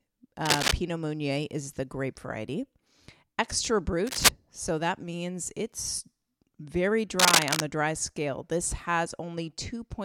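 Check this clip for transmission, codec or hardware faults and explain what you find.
Cable scratch noise occurs three times, from 0.45 to 0.73 s, 4.07 to 4.29 s and 7.19 to 7.62 s. Each burst is likely a worn cable or connector being shifted, so its contact resistance jumps about erratically. The result is dense, ragged scratching and rustling, roughly 5 dB louder than the speech, laid over it for a fraction of a second.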